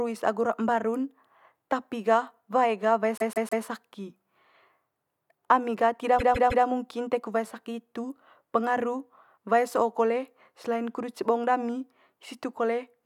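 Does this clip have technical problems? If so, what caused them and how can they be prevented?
Yes. This speech clip has repeated frames twice, from 3.18 to 3.65 s and from 6.18 to 6.65 s. Each time, a block of about 157 ms plays three extra times, so the speech stutters. A run of compressed frames was written or sent more than once, and the decoder played it again. The block length fits about six frames. Each event adds 470 ms. Checking sequence numbers or timestamps and dropping duplicate frames before decoding prevents this.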